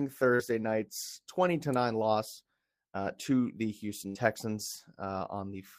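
At 0.35 to 0.42 s there is a short concealed packet loss: about 40 ms of the speech stream did not reach the decoder in time, and the receiver synthesised roughly 38 ms to cover it by extending the preceding sound before crossfading back into the received signal. The result is a brief smear in the speech rather than a silent gap, with the underlying content of that instant replaced by an estimate.

At 4.07 to 4.18 s, just after "loss uh to the", a burst of packet loss removes about 80 ms of consecutive audio. The decoder fills about 78 ms by carrying the last sound forward and attenuating it as the gap lengthens, so a voiced segment turns into a held buzz and an unvoiced one into a decaying hiss. Playback then resumes later in the stream, and the speech that fell within the gap is absent.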